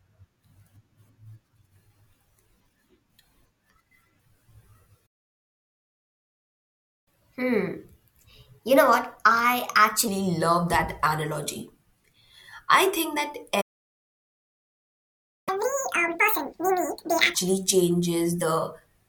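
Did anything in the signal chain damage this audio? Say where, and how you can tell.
Yes, the damage is at the playback stage. The speech is cut off mid-flow by a playback stall twice: silence from 5.06 to 7.08 s, lasting 2.0 s, and again from 13.61 to 15.49 s, lasting about 1.86 s. No noise or crackle fills those gaps; the output simply stops and then resumes. The likely cause is the player's buffer running dry or its output thread being blocked, leaving the device with nothing to render.

Each stall is followed by catch-up at higher speed, a telltale sign of playback resampling. From 7.08 to 10.08 s the speech runs at 1.15 times normal speed, with pitch raised by about two semitones. From 15.49 to 17.35 s it runs at twice normal speed, with pitch up by around ten semitones. Speed and pitch rise together and then snap back, which shows the player is draining its backlog by resampling rather than time-stretching, trading pitch accuracy for regaining lost time.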